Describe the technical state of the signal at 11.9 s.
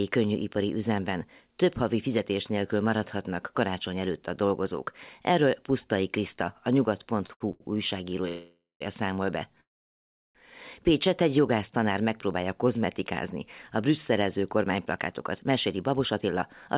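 At 11.9 s the speech is intact, with nothing present above 4 kHz as expected from the telephone-band call path it passed through.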